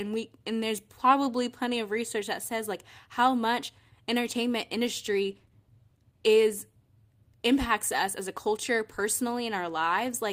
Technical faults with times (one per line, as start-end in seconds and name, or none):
5.28-7.21 call bitrate drop